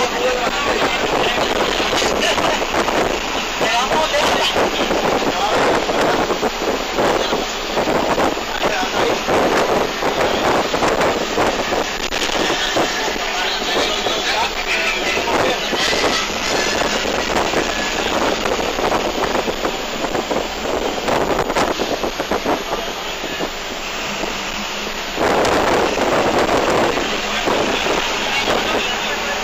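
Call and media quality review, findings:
Switching supply whistle, present for the whole clip. High, thin tone wandering between 6.3 and 7.4 kHz, centred near 7 kHz, roughly 25 dB under the programme. Probable component: switch-mode power supply in burst mode or beating against a second converter. Distinguished from mains hum by its height.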